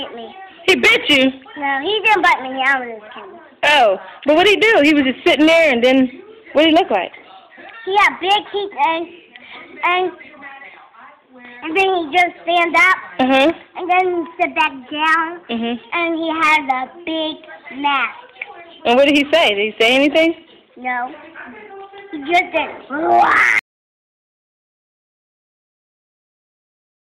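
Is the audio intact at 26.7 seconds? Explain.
No, at 26.7 s you're in an audio dropout to silence that starts at 23.59 s and runs to the end: dead silence with no room tone, likely from a lost input.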